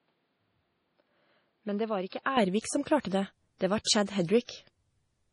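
Speech throughout, and for the first 2.37 s the recording likely came through a poorer input device before switching back to the better one, with no gap at the change. Until then the band stops at about 5.2 kHz, the level sits roughly 10 dB lower, and a noise floor about 45 dB under the speech comes in with it, so the opening sounds duller and quieter and then abruptly opens up at 2.37 s. Over the whole clip the likely cause of the rest of the damage is MP3 compression, and it is heavy, which fits a low bitrate of around 32 kbps. Short of bits, the encoder drops weaker frequency lines frame by frame and removes everything above about 10.6 kHz, so the speech takes on a watery, swirling texture with chirpy s sounds and no air on top. The same block coding produces pre-echo at five attacks: 3.02 s (spread over 26 ms), 3.08 s (34 ms), 3.84 s (28 ms), 4.05 s (24 ms) and 4.44 s (45 ms). In each case a sharp onset fell late in a transform block, and the quantisation noise sized for that loud onset was spread across the whole block, including the quiet stretch before it. 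You hear a brief hiss running ahead of each attack, and the attack itself sounds softened and smeared rather than crisp.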